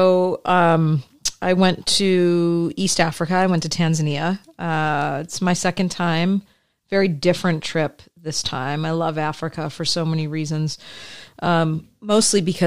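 No technical faults can be heard anywhere in this speech recording.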